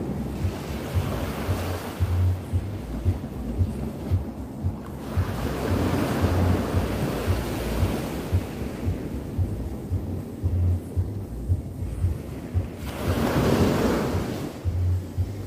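No technical faults are audible anywhere in this audio.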